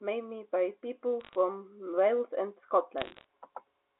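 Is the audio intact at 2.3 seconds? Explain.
Yes, the audio is intact at 2.3 seconds: the speech there has no fault, carried over the G.711 telephone coding that limits it to the narrow phone band.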